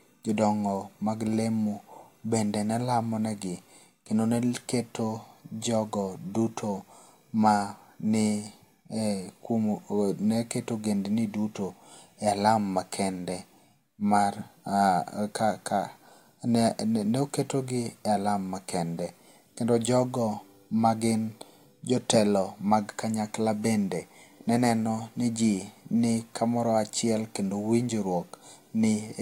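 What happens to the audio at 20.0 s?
Nothing goes wrong at 20.0 s: the speech there carries on intact, with no dropout, click, distortion or other fault.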